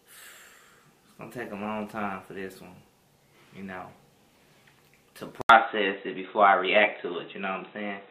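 At 5.41 s the sound drops out for 80 ms, then turns dull, with nothing above 3.9 kHz. A faint new hiss and a small level shift follow, likely an input switched to a poorer device.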